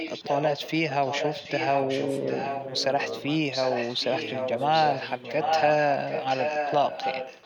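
It's a speech clip with an echo leak running through nearly all of it: a delayed copy trails the talker by about 0.76 s, from 0 to 0.73 s, 0.89 to 3.23 s, and 3.51 s to the end, around 10 dB down, rising to roughly 5 dB down in that last stretch. Likely a far-end speakerphone whose echo canceller isn't fully cancelling.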